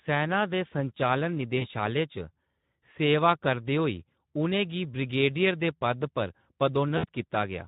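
Across the whole speech clip the voice sounds hoarse and grainy, with a noisy edge on every syllable. That is Speex codec damage: this CELP coder has too few bits to rebuild the excitation faithfully, and the degree of roughness fits a rate of around 11 kbps.

From 1.57 to 1.67 s the voice smears into a stretched, fading sound, then comes back weak and distorted before recovering. This is VoIP packet loss concealed by the speech codec: about 40 ms of audio went missing, consistent with two 20 ms frames, and the decoder extrapolated from its last pitch and filter while lowering the gain.

The same smeared, decaying sound returns from 6.97 to 7.05 s. Here roughly 60 ms was lost, fitting three frames, and because each concealed frame builds on the previous one the sound stays thin for a short while after the packets return.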